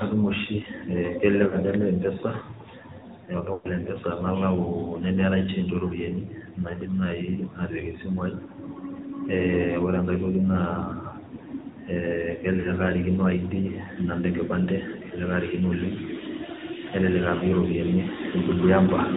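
Speech runs through the whole clip with a thin, boxed-in, buzzy and synthetic edge and no top end at all. That is the sound of the AMR narrowband mobile codec. The signal is squeezed into telephone bandwidth, so nothing above 4 kHz survives, and the voice is rebuilt from a vocal-tract model driven by sparse pulses. The codec damage is plainly audible, which fits a mid-range bitrate of around 10 kbps. There are also four short glitches where the voice smears, sags and turns warbly before recovering slightly rough: at 1.48 to 1.57 s, 3.54 to 3.69 s, 12.60 to 12.72 s and 17.38 to 17.45 s. These are lost AMR speech frames. Corrupted frames were thrown away, and the decoder papered over each gap by repeating its last good pitch and filter settings at falling level. Three of the gaps cover about 40 ms each and pass as brief dips. The one near 3.5 s covers about 100 ms, long enough for the sound to stretch out and nearly fade before the voice returns weakly.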